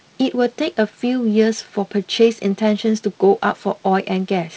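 No technical faults are audible.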